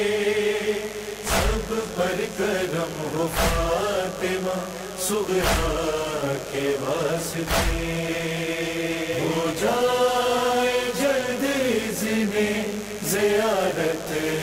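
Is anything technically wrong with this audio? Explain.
Yes. Throughout the clip there is mains buzz: a dimmer, rectifier or unshielded line is injecting sharp switching spikes locked to the 50 Hz supply, spreading harmonics into the kilohertz range. The result is a constant raspy buzz sitting only about 15 dB below the wanted sound.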